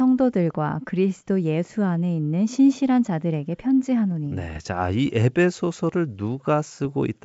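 Bit errors on an ADPCM link hit this speech recording at 4.50–4.58 s and again at 6.85–6.88 s, heard as pops and rough bursts with brief jumps in level. Each corrupted bit, at a low error rate of well under one percent, throws off the decoder's step size and predictor. The disturbance therefore rings on for some milliseconds, over wideband G.722 coding that carries the speech clearly.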